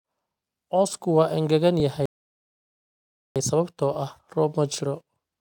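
At 1.8 s, just after "waa engegan", there is a repeated buffer. Fresh audio did not reach the device in time. So it played its last chunk once more. The repeat lasts about 10 ms, which fits a 10 ms buffer. It is too short to hear as a stutter. It comes across as a click or brief buzz, with a hard join where the copy meets the original.

From 2.06 to 3.36 s, a rebuffering stall follows. The player ran dry of downloaded audio and waited for more. The speech drops to silence after "waa engegan". It picks up exactly where it stopped, at "sababtoo ah". No speech is skipped. The gap adds 1.3 s to the clip.

From 3.94 to 3.96 s, a second repeated buffer occurs. This time the same 10 ms chunk plays twice more. That again points to a 10 ms buffer. The two quick copies make a click or brief buzz. Practically no audio is lost.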